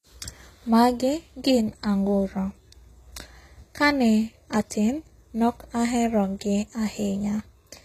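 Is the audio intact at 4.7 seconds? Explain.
No. At 4.70 s there is pre-echo: a brief hiss of about 14 ms smears in just before a sharp attack. The codec spread its quantisation noise across the whole transform block, so noise meant for the loud onset leaks into the quiet moment ahead of it. Unlike a click or dropout, it is a soft noisy lead-in rather than a gap or spike.

The same passage also carries gritty, metallic-sounding treble over a spectrum with nothing above 14.9 kHz. This likely comes from HE-AAC compression at a rate that fits roughly 20 kbps, with the upper band rebuilt from copied lower bands. Unlike plain low-pass filtering, the top end stays bright but its harmonics don't line up.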